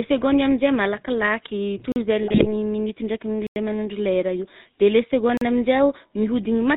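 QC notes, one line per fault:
Throughout: GSM full-rate codec. Nothing above 4 kHz survives, and the pulse-driven excitation gives the speech a plainly audible buzzy, gravelly roughness, consistent with 13 kbps.
1.92 s, 3.47 s and 5.37 s: block of digital silence. Holes of 40 ms, 93 ms and 40 ms cut straight to silence with no fade. The longest gap sounds like a dropout.
2.22 to 2.48 s: GSM bit errors. Corrupted filter, pitch and gain values bend the spectrum and spike the level, so the speech turns to squawks and gargling.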